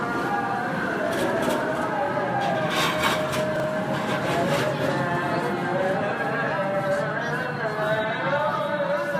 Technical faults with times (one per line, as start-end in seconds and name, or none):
3.56-3.64 chunks out of order